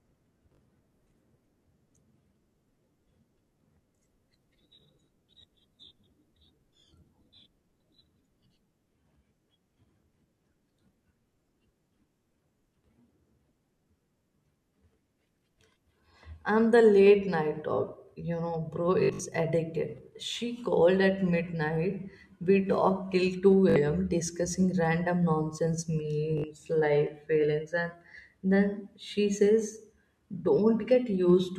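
Speech with Bluetooth stutter at 0.55, 6.81, 19.03 to 19.2, 23.70 and 26.38 s. Late or lost packets made the receiver repeat its last short slice, giving a brief buzz lasting 20 to 60 ms, and about 120 ms in scattered bursts near 19 s.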